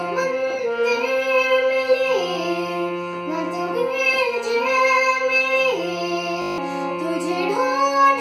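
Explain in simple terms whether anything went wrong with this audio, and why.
Something went wrong at 6.42 s: a system hang loop. The computer briefly froze, but the sound hardware kept replaying the last 20-millisecond scrap of audio it held, eight times over, until 6.58 s. Because that scrap is so short and repeats 50 times a second, it comes out as a steady buzz rather than a stutter. The real sound during that stretch, roughly a sixth of a second, is lost.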